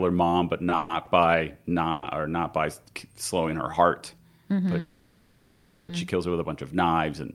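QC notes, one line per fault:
0.69–0.73 s and 1.05–1.09 s, short stall from a late packet: the speech holds for 20 ms with a slight buzz or dip, then resumes. The jitter buffer briefly ran empty.
0.77–0.91 s, call audio freeze: the last sound carries on as a fading buzz or hiss for 120 ms, then speech resumes. Delayed packets likely emptied the buffer.
1.91–2.04 s, call audio freeze: a 110 ms hold of the last sound, as a buzz or hiss, is inserted before speech continues. A held-up packet burst is the likely cause.
4.80–5.91 s, call audio freeze: the last sound is stretched into a fading buzz or hiss for 1.09 s without dropping to silence. Speech then picks up where it stopped, likely after a long network hold-up.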